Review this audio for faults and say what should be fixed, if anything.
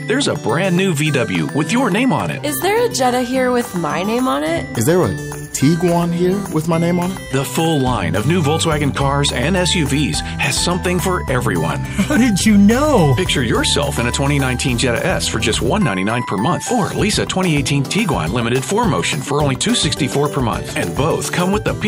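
Nothing needs fixing, since the signal shows no audible technical faults anywhere in the recording.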